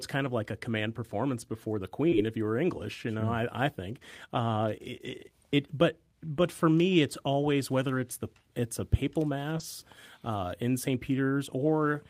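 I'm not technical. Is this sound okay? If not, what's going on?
No. Two kinds of call-transmission faults are audible in this speech.

Short concealed packet loss: a fraction of a second of sound arrived too late to play, so the receiver filled the gap by extending the last sound and blending back in. It occurs at 2.09 to 2.14 s, right after "command performance before the" and before "if you were", and again at 9.58 to 9.62 s, just after "the it's a papal". Each is a brief smear or wobble of about 20 ms.

Lost packet rebuilt from error correction: here a lost chunk was replaced by a rougher backup copy carried in the next chunk, so nothing drops out, but the sound turns briefly grainier and noisier. It happens at 2.12 to 2.14 s and 9.60 to 9.62 s, finishing off the two gaps above, and on its own at 5.06 to 5.16 s, where about 60 ms is rebuilt, which fits three separate lost packets.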